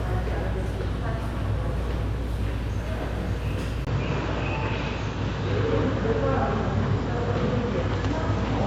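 At 3.85 s the input was likely switched to a poorer device, which holds to the end. After a 20 ms gap, nothing above 7.6 kHz remains, so the sound turns duller, with faint new background noise, at about the same overall level.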